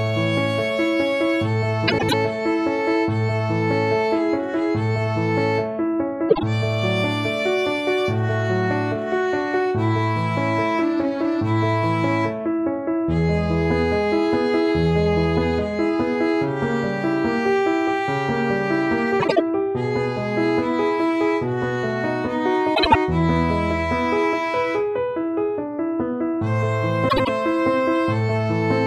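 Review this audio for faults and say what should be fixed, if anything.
Frames out of order at 1.88–2.14, 6.29–6.43, 19.19–19.40, 22.75–22.96 and 27.08–27.29 s. Two neighbouring blocks of about 50 to 105 ms each play swapped, so each stretch flutters but loses no time. Reordering frames by sequence number before decoding would prevent it.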